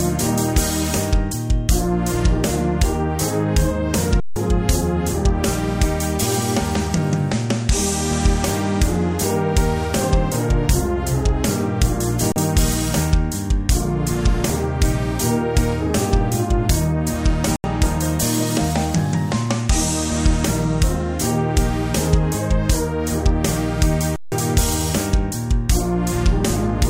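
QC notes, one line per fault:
4.20–4.36 s, 12.32–12.36 s, 17.56–17.64 s, 24.16–24.32 s, underrun with held sample: the sound freezes flat, then resumes. The output buffer emptied, the converter held its last value, and the missing audio was skipped.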